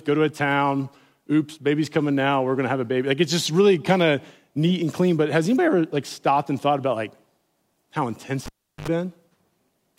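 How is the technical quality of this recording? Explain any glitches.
One glitch affects the speech: at 8.46 to 8.88 s the cable is pulled and plugged in. Broken contact brings a pop, about 0.37 s of near silence, 73 ms of 50 Hz buzz, then another pop.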